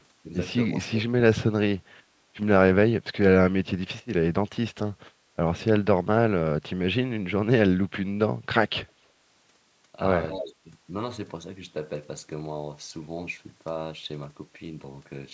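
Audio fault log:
5.76–5.87 s and 10.41–10.66 s, speech suppressed in double talk: the echo canceller likely mistook overlapping talk for loudspeaker echo and turned the line down. The speech dips sharply, by about 30 dB at 5.76 s and only about 5 dB near 10.5 s.
10.30–10.54 s, echo leak: the far end's canceller likely let loudspeaker pickup through. A delayed copy of the speech, trailing by 258 ms and sitting about 10 dB below it, is briefly audible, overlapping the second suppression.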